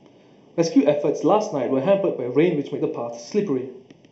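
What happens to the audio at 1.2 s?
At 1.2 s the speech carries channel delay (comb filtering), which runs through the whole clip rather than starting there. One channel trails the other by roughly 0.4 ms, and when the two fold to mono the shared content cancels at evenly spaced frequencies, the first notch falling around 1.5 kHz. The result is a hollow, phasey coloration with fixed notches, so the voice sounds hollow at that moment as everywhere else.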